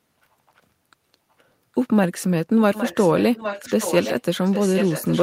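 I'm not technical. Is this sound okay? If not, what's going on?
No. There is an echo leak from 2.74 to 4.22 seconds and again from 4.44 seconds to the end: a fainter copy of the speech repeats about 0.81 seconds late, likely because one side's loudspeaker sound reached its microphone and was sent back.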